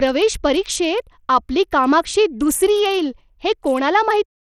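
Speech with gritty, coarse treble that thins and flickers throughout, likely from Bluetooth SBC compression at a starved bit pool, fitting roughly 80 kbps; the closing fade out by 4.26 s is smooth.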